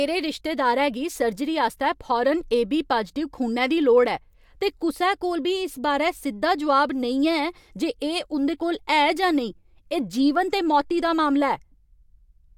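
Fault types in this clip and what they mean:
No technical faults can be heard in the speech.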